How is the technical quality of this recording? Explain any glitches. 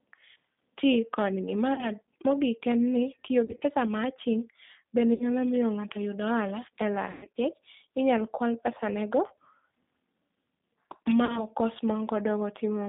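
The quality is poor: the speech has been through a low-bitrate phone codec and has several dropouts.

Throughout, the G.729 codec (8 kbit/s) limits the band to about 150 Hz to 3.7 kHz. Its pulse-based reconstruction leaves the speech audibly rough and synthetic. This is steady, unlike burst-like dropouts.

Packet loss concealed by the speech codec occurs at 1.74–1.89 s after "ti kodgi", at 3.45–3.63 s, at 5.14–5.29 s before "miyo ng'ato yud ohala", at 7.11–7.37 s after "yud ohala e lal", and at 11.25–11.44 s. Between 40 and 160 ms of audio is missing in each. The decoder extrapolates from its last pitch and filter into a fading buzzy tone or coloured noise rather than leaving silence, and the speech stays weak briefly afterwards.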